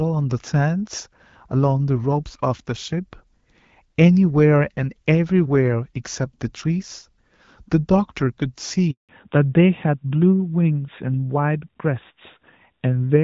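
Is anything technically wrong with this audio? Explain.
Yes, there are two faults, both on this speech clip's mobile link.

At 8.91 s a handover gap begins: the network switch delivers no frames, so the audio cuts out for 180 ms until 9.09 s.

From 9.09 s to the end, fallback to narrowband: content above 4 kHz disappears, leaving the speech duller and rougher than the HD Voice portion before it. That earlier portion's light coding fits AMR-WB at 12.65 kbit/s, and the later sound points to AMR-NB at around 12.2 kbit/s.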